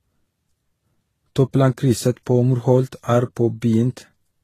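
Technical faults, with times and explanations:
Throughout: transcoding between lossy codecs. Nothing is heard above 14.2 kHz, so the top of the spectrum is dull and closed in. Two kinds of coding damage sit together. The first stage fits a low-rate HE-AAC encode at 20 kbit/s. Its artefacts are heard together with those of a later Vorbis encode at 34 kbit/s. The likely cause is re-encoding. The second codec spent bits on the first one's artefacts, added its own, and kept the lower cut-off.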